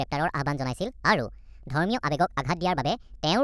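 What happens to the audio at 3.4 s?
At 3.4 s the clip is still affected by the wrong sample rate fault that runs through the whole clip. The speech plays 1.5 times too fast and about 7 semitones high, which fits 16 kHz material played at 24 kHz. Unlike a pitch shift or time-stretch, speed and pitch rise together.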